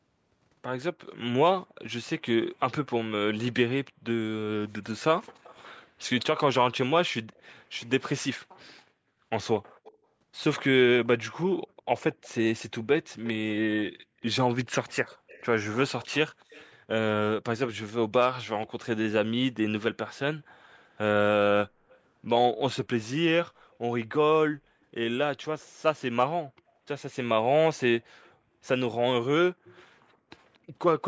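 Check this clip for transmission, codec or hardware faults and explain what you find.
Yes, two faults are present: an echo returning from the far end and brief dips in the background sound.

Echo leak, 5.43–16.71 s, 20.96–21.98 s and 25.6–30.58 s: a faint copy of the speech follows about 235 ms behind, likely from a loudspeaker whose echo canceller let some through.

Background gated by the echo canceller, 5.84–6.06 s, 13.98–14.22 s and 20.49–20.57 s: the canceller clamps the microphone, so the room sound drops by up to about 40 dB for a fraction of a second.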